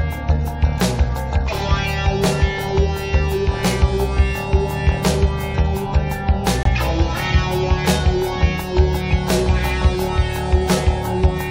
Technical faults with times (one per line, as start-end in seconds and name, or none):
6.63-6.67 corrupt frame muted